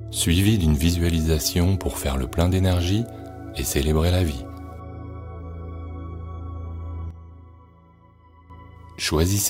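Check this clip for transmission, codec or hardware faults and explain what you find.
One fault stands out: a sudden gain jump. At 7.11 s the level drops by about 10 dB in a single step, with no fade. It stays down until 8.50 s, then returns just as abruptly. The sound and the background noise fall and rise together, so the whole signal shifts, not just the source. The likely cause is a digital gain setting applied instantly rather than ramped in over several milliseconds.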